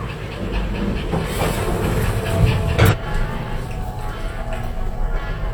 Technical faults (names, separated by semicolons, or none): stream segment skipped